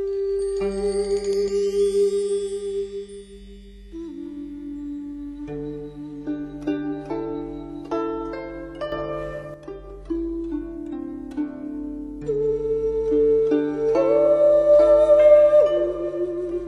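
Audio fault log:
8.92–9.54 s, sudden gain jump. The level leaps up by about 8 dB at once, with the background noise rising with it, then drops back at 9.54 s. The likely cause is a digital gain change applied between adjacent samples without any ramp.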